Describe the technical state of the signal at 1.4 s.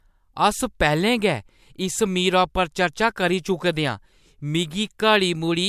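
At 1.4 s the speech signal is intact, with no dropout, clipping, distortion or other fault audible at that point.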